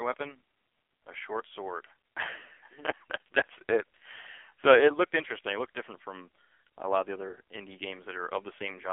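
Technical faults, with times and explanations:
Throughout, AMR narrowband mobile codec: heavy damage, with the speech held to a 300 Hz to 3.5 kHz line band and nothing above 3.6 kHz. At 5.9 kbps the vocal-tract model gets few excitation pulses per frame, so voicing turns buzzy and synthetic.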